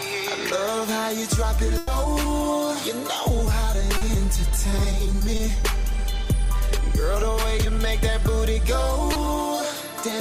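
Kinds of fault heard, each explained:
Burst of packet loss: Around 1.77 to 1.89 s a run of audio didn't arrive in time to be played, so the receiver kept the last bit of sound going for about 100 ms and faded it down as the gap stretched. You hear a held buzz or hiss that dies away, and the audio then picks up again about 100 ms further along than where it stopped, so that stretch is simply gone. There's no outright silence in the hole.
Short concealed packet loss: Three tiny dropouts, at 3.97 to 4.03 s (about 40 ms), 5.37 to 5.41 s and 9.13 to 9.17 s (about 20 ms each). Each time the decoder was missing a sliver of audio and patched it by extending what came just before, following its pitch where there was one, otherwise using shaped noise, before blending back in. They come across as quick smears or wobbles.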